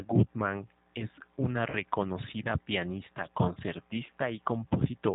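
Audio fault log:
Throughout, G.729 codec: plainly audible 8 kbit/s coding cuts everything above 4 kHz and rebuilds the speech from a filter and pulses, so it sounds rough and a bit synthetic.
1.70 to 1.74 s, VoIP packet loss concealed by the speech codec: right after "es una", roughly 30 ms goes missing and the decoder stretches the last sound into a fading buzz or coloured noise.
4.07 to 4.12 s, VoIP packet loss concealed by the speech codec: about 20 ms lost this time, patched the same way, leaving a short stretched smear and a weak or distorted restart.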